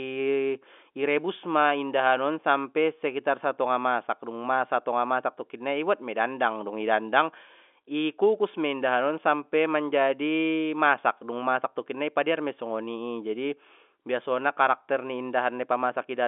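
No technical faults are audible.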